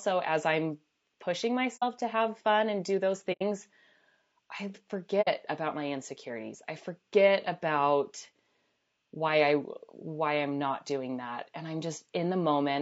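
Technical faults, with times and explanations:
Throughout: low-delay AAC compression. The sound is rough and grainy, with noise between harmonics and a synthetic-sounding top band, likely from AAC-ELD at a rate that fits about 32 kbps.
1.76–1.84 s, 3.32–3.42 s, 5.21–5.29 s: AAC frame loss with muting. Soft-edged dropouts of about 60, 90 and 60 ms occur after "as I'm pushing", after "fun and do those", and unmarked. They fade out and in because the lost spectrum was zeroed and the overlapping windows taper the edges.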